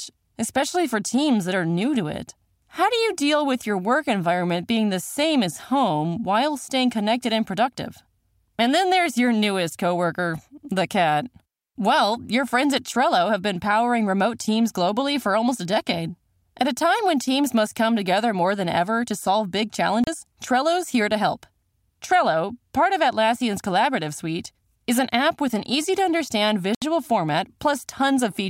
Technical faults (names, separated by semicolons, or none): Bluetooth stall